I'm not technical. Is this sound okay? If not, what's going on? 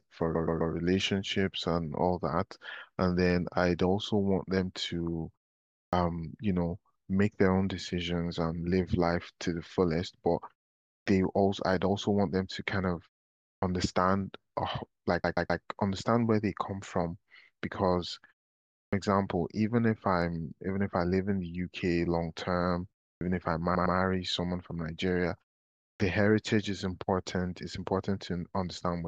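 No. There are two problems. First, repeated frames: at 0.34 to 0.72 s and 15.23 to 15.62 s, a 128 ms chunk replays three extra times, and at 23.74 to 23.96 s a shorter chunk repeats twice, so you hear a stutter.

Second, a clipped start after a pause: at 5.87, 11.01, 13.57, 18.88, 23.16 and 25.95 s, about 50 ms of sound is lost just after a short pause. The playback device is likely slow to wake up, so speech starts abruptly.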